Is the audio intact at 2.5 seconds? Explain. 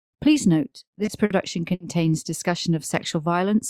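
Yes, at 2.5 seconds the audio is intact, with no dropout, click, distortion or other fault at that point.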